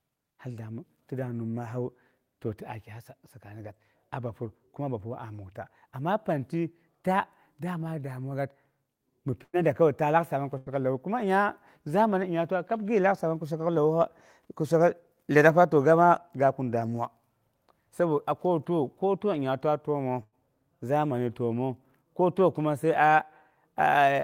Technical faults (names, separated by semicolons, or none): burst of packet loss; jitter buffer speed-up